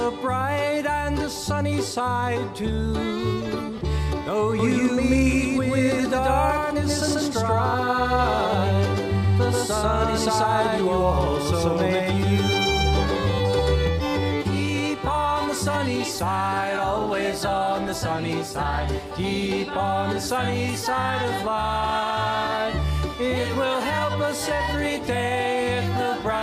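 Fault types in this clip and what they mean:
Doubled audio track: from 4.59 to 13.87 s a second full-band copy of the sound runs about 150 ms behind at roughly the original's level, with no decay or room colour, starting and stopping abruptly; likely a slower second capture path or an edit holding two offset copies.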